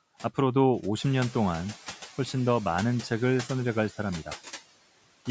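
From the start and throughout, noise suppressor artifacts shape the background: a suppressor pulls down the bands it judges to be steady noise, frame by frame, cutting that noise by about 14 dB, so it dips between phrases and creeps back under the speech. Unlike a noise gate, which shuts everything off abruptly, it lowers noise band by band, so the background never falls fully silent. The room noise rises by about 11 dB around 1 s, to sit roughly 18 dB below the speech. Nothing reaches above 8 kHz, as expected from call microphone processing.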